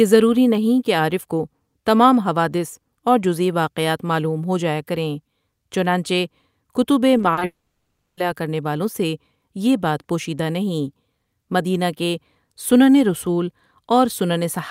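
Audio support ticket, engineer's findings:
Repeated packet loss (robotic sound), 7.17–7.43 s, right after "جایا کریں چنانچہ کتب": choppy speech. Four short gaps, longest 40 ms, about 100 ms lost in total. The jitter buffer keeps stretching the last bit of sound to cover them, so roughly 38% of that stretch is patched.

Long network dropout, 7.45–8.19 s, ending just before "کرنے والوں سے یہ": a brief fading buzz, then near-silence for about 0.66 s, 0.72 s missing in all. Likely a network outage. Concealment gives up and speech resumes with the gap gone.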